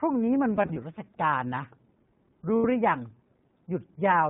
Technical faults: iLBC codec; lost iLBC frames

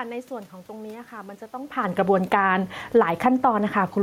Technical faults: automatic gain falling; automatic gain rising

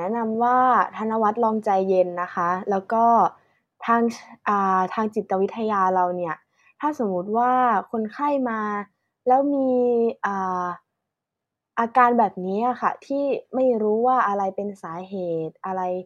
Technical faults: none

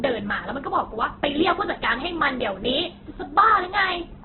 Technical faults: Opus compression

